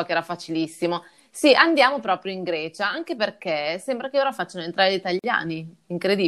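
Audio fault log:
5.19–5.24 s, gap at a join of encoded pieces: two separately encoded segments were joined without trimming the encoder's start delay and final-frame padding, so just after "ora facciano entrare gli" the speech drops into a 46 ms gap with smeared edges, then resumes where it stopped.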